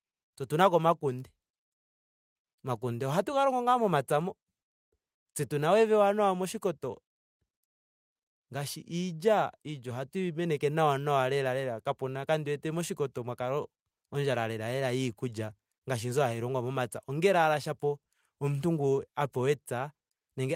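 Speech recording with no audible technical faults anywhere in it.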